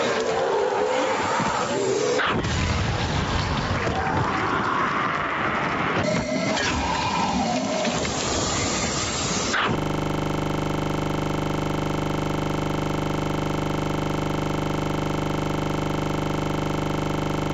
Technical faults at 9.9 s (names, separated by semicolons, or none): gain pumping; system hang loop